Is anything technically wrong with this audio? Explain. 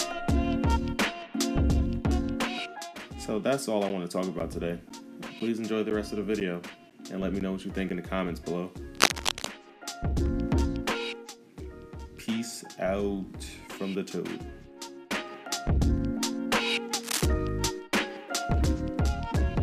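Yes, there are two problems.

From 3.89 to 7.9 s there are periodic USB or driver dropouts: about every 0.5 s, roughly 10 ms of audio goes silent, about ten times in all. A background task is stalling the audio path on a fixed schedule, so each gap is heard as a tick. The exact spacing distinguishes these from random clicks.

There are also two bursts of scratching, from 8.95 to 9.46 s at about 5 dB above the signal and from 17.03 to 17.26 s at about the signal's level. This is likely cable scratch noise from a loose cable or connector being moved. Unlike the dropouts, it adds dense, irregular rustling rather than regular gaps.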